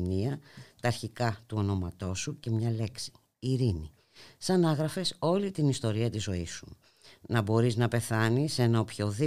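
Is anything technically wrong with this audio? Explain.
No, the recording shows no technical faults that can be heard anywhere in its course.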